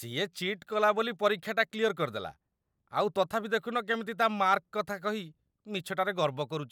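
Speech recording with no audible technical faults anywhere.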